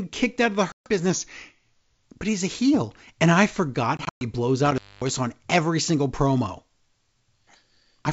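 A speech clip over wideband G.722 telephone coding, which stays clean up to about 7 kHz. Packet loss on an ADPCM call hits twice. From 0.72 to 0.89 s, 140 ms drops out as a hard silent gap, roughly seven packets. From 3.97 to 4.24 s, 160 ms goes missing in pieces spread over 240 ms. The longest hole is 120 ms. After each gap, the decoder's predictor and step size no longer match the sender's. The speech comes back slightly distorted for a moment. From 1.10 to 2.03 s, the audio runs 5.6% slow and drops a full semitone in pitch. This is likely a drift correction step, with clock-matching software retuning playback to manage its buffer. From 4.66 to 5.14 s, an intermittent contact cuts the sound for about 0.24 s. Crackle marks both edges, and faint hiss fills the opening.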